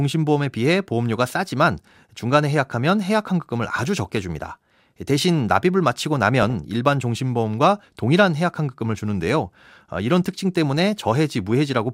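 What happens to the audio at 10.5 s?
Nothing goes wrong at 10.5 s; the speech there plays through intact, with no dropout, click, distortion or other fault at that moment.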